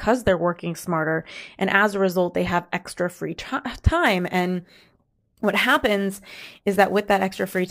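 From 4.06 s to the end, the converter's clock wanders by roughly 7 microseconds, so sample clock jitter adds hiss roughly 25 dB below the speech, harshest on loud, bright sounds.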